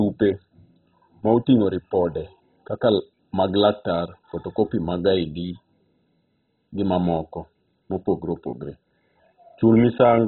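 Speech runs the full clip with heavy MP2 compression damage from start to finish: nothing survives above about 4.1 kHz, and the remaining bands flicker in and out with a gurgling, granular roughness. The likely cause is MPEG Layer II coding at a very starved rate, fitting something near 16 kbps, where upper sub-bands are shut off and the rest coarsely quantised. That unstable, watery grain separates it from a plain low-pass filter, which would sound dull but clean.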